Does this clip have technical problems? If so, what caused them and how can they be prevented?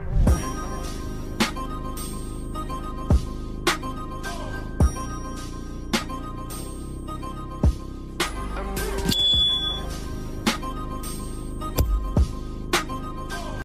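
No, nothing technical stands out here, so there's nothing to trace back or guard against this time.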